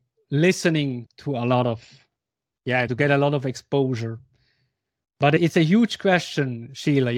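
At 2.12 to 2.16 s the speech gives a brief stutter: a short slice of about 40 ms sounds twice in a row, with a hard join where the copy begins. This is a repeated buffer fault. Fresh audio failed to reach the playback device in time, so it replayed the last chunk once more, which fits a 40 ms buffer. Roughly 40 ms of the original speech is skipped in exchange.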